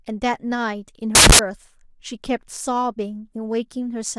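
From 1.15 to 1.39 s the speech turns into loud, harsh broadband noise. These are samples built from the wrong bytes: for about a quarter of a second the reader combines each sample's bytes out of order or offset by one, so the rapidly fluctuating low bits become the dominant part of every value.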